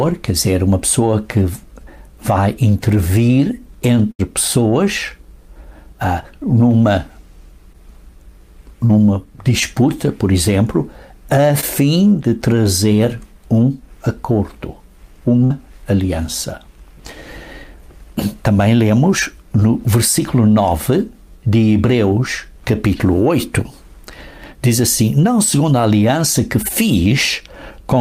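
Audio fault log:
4.11–4.21 s and 15.44–15.52 s: burst of packet loss. About 80 ms of audio is lost in the first gap and 60 ms in the second. The receiver covers each hole by extending the last sound it had, for 74 ms and then 56 ms, and fades it out. That stretch is a held tone or hiss that dies away. Then the sound jumps ahead. The material between is gone.
7.73–7.76 s, 8.86–8.93 s, 11.60–11.64 s and 19.60–19.63 s: short concealed packet loss. Each gap is brief. About 20 ms goes missing at three of them and 40 ms at 8.86 s. The decoder fills each one with a guess built from the preceding sound and then blends back into the real audio. The fills last 10, 35, 20 and 11 ms. At 8.86 s the repair also adds roughly 10 ms. Each gap is heard as a quick smear or wobble.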